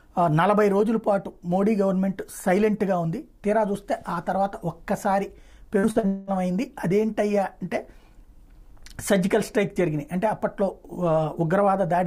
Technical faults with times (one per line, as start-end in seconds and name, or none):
5.79-6.06 short concealed packet loss
6.07-6.30 long network dropout